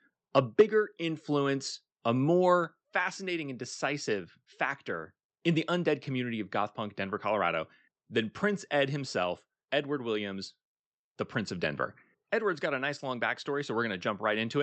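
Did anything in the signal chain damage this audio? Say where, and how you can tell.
Yes. From 0.36 to 0.61 s, just before "influence a", the loudest syllables take on a harsh, crackling edge with flattened peaks, about 4 dB beyond the converter's limit, affecting only a small fraction of samples. This is microphone overload, most likely from input gain set too high at the converter stage, so the waveform tops were sheared off. Unlike codec distortion, the grit follows the signal's peaks rather than smearing evenly across the band.

At 0.61 s, right as the overload ends and before "influence a", the microphone volume steps down by about 4 dB. The voice and the background fall together in a single instant, which marks it as an input-device gain change made in call processing, not an edit. A fade would ramp, and a noise gate would spare the background. The timing directly after the clipped peak points to the software pulling the device gain back in response. 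The whole clip passes through a WebRTC path limited to about 8 kHz, which fits Opus.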